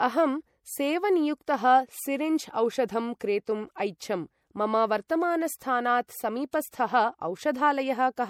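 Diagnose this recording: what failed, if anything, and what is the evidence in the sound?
Codec stage: plainly audible watery, swirly smearing across the speech, likely MP3 compression at a rate fitting 64 kbps. A spectrogram shows flickering high bands and a hard cutoff at 19.9 kHz.

Pre-echo, also codec stage: short hiss leads attacks at 1.46 to 1.48 s, 5.08 s and 6.51 to 6.53 s, block noise smeared ahead of each onset. The waveform shows fuzz preceding each transient.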